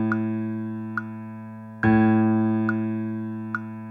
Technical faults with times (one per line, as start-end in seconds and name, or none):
none